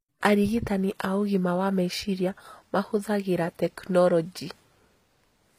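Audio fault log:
Throughout: HE-AAC compression. Treble sounds synthetic and s sounds come out gritty and lispy. Likely spectral band replication rebuilding the highs at a low bitrate, around 24 kbps.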